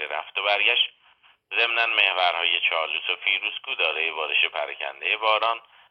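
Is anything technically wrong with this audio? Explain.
Yes. From 0.86 to 2.23 s there is channel delay, causing comb filtering. One channel arrives roughly two samples late, and the pair is summed to mono. Shared content cancels at regular intervals, the first notch falling near 10 kHz. The top end turns dull.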